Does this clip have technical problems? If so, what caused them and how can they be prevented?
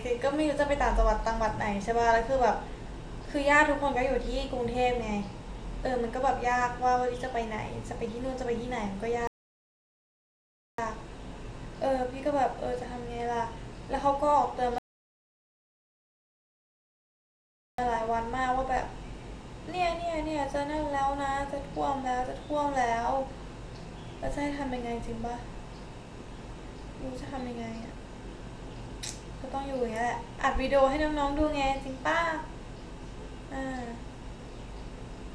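Yes: two rebuffering stalls, at 9.27–10.78 s and 14.78–17.78 s, where playback starved, went silent for 1.5 s and 3.0 s, then resumed seamlessly. A larger playback buffer or adaptive bitrate switching prevents this.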